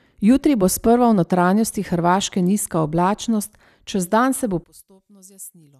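One channel inverted, from 4.64 s to the end of this speech recording, right after "se bo": the voice suddenly drops by about 24 dB and nearly disappears for the final 1.15 s. The likely cause is one stereo channel flipping polarity, so that when the pair is summed to mono the centred voice, identical in both channels, cancels itself. Only the small difference between left and right survives, which is why so little remains audible.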